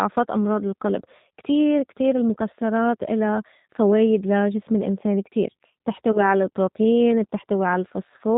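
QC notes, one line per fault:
throughout: G.729 codec. Nothing above about 4 kHz survives, and the sound is slightly rough and synthetic, which fits an 8 kbit/s G.729 stream. The decoder rebuilds each frame from a filter, pitch predictor and few pulses. This is steady coarseness, not wideband hiss or the pre-echo of transform codecs.
6.12 to 6.20 s: VoIP packet loss concealed by the speech codec. The decoder stretched its last pitch and filter to cover roughly 20 ms of missing audio, which fits a single lost packet, and faded it. The disturbance lasts about 80 ms because later frames build on the guessed state. This is a smeared, fading continuation rather than a silent gap or click.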